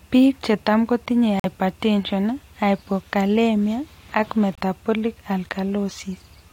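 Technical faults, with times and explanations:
1.40–1.46 s and 4.55–4.60 s, corrupt frame muted: right after "chetam kotinye" and again after "hypokalemia ak" the speech cuts to dead silence for about 60 ms and 42 ms. That fits a couple of damaged compressed frames the decoder rejected, with silence filled in and the timing left intact.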